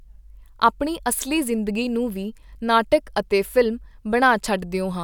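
Speech, with no technical fault to point to anywhere in the recording. Nothing in the audio calls for a time, a cause or a correction.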